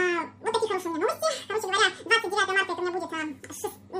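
Throughout, the sound runs at twice its proper speed and an octave (12 semitones) too high, the signature of a wrong sample rate: playback at about double the recording rate, which fits roughly 22 kHz material played at 44.1 kHz. A spectrogram shows every component shifted up an octave, and the waveform shows events squeezed to half their natural length.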